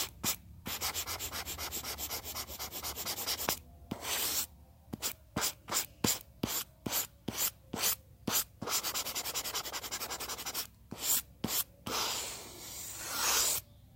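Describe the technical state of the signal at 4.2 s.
At 4.2 s the signal is intact, with no audible fault in the sound at that moment.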